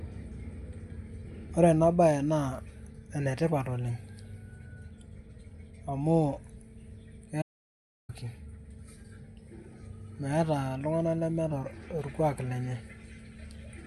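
At 7.42 s the speech drops into an audio dropout to silence lasting about 0.67 s, until 8.09 s, most likely from the input being lost while zeros kept being written. The waveform goes flat and the spectrogram shows a blank band, with no room tone.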